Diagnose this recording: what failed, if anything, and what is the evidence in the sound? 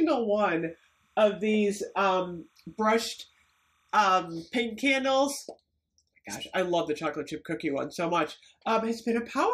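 Timecode bleed in the analogue wiring. From 0.60 to 3.96 s a faint chirping warble sits roughly 40 dB below the sound, flipping between pitches near 1 and 2 kHz. The steady rhythm fits 29.97 fps linear timecode leaking from an adjacent track or cable.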